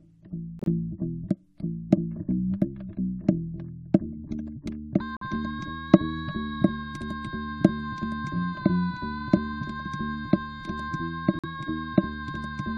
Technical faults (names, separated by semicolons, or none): corrupt frame muted